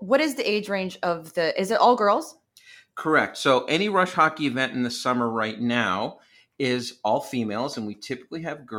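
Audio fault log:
No faults heard in this speech recording.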